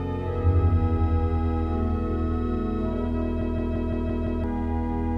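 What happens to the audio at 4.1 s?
At 4.1 s the audio is inside a system hang loop running from 3.41 to 4.44 s. A single 170.67 ms slice repeats exactly six times, which fits an 8192-sample ring buffer that the output hardware kept replaying after the host or driver stalled and stopped refilling it. At 5.86 repeats per second this comes across as a hard, mechanical stutter rather than a buzz, and about a second of the real audio is missing.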